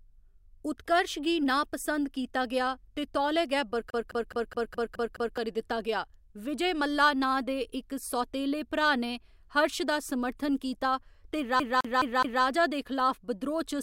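A scratch on the disc throws the laser back one track at the same point on every turn, so the speech twice gets caught as a CD stuck on one turn. From 3.90 to 5.38 s the same 210 ms slice plays seven times, and from 11.60 to 12.44 s it plays four times, with a brief mute at each jump. The result is a rapid, perfectly even stutter, the familiar sound of a skipping CD.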